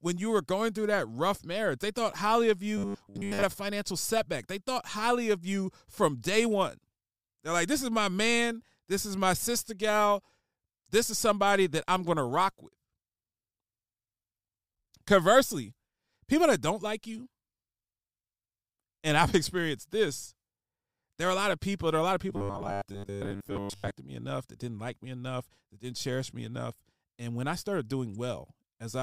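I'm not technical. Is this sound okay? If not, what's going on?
No. The speech turns into a rigid metallic buzz twice: 2.78 to 3.44 s, after "thought highly of", and 22.30 to 23.98 s, after "are a lot of". This is robotic sound from repeated short buffers. Audio likely arrived too slowly, so 10 ms scraps were replayed, replacing most of the real sound with a 100 Hz drone.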